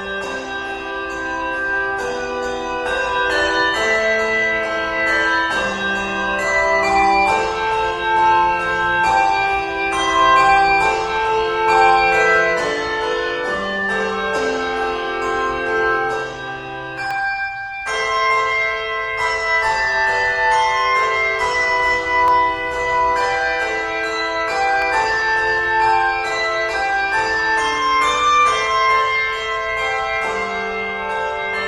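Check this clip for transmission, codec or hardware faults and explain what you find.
Three isolated clicks point to one fault type, dropped samples, at 17.11 s, 22.28 s and 24.82 s. Each is a single sharp tick, with nothing audibly missing around it. The likely cause is a fraction of a millisecond of samples lost from the stream, so the waveform jumps abruptly from one value to a later one. On a waveform this appears as a small step discontinuity, and on a spectrogram as a thin vertical line spanning the frequency range.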